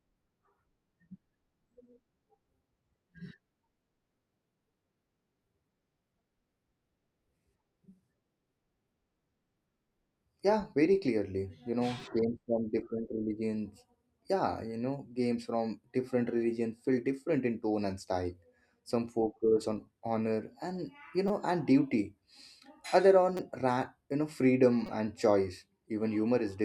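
Fresh audio failed to reach the output in time, so the device replayed its last buffer, a repeated buffer fault. At 12.0 s a roughly 5 ms slice plays twice more, and at 21.28, 23.37 and 24.86 s four more times. The slice length fits a 256-sample buffer. Almost nothing of the speech is lost, but each event is heard as a brief hard-edged click or buzz.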